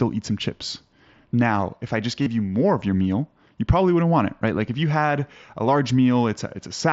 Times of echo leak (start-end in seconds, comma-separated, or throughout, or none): none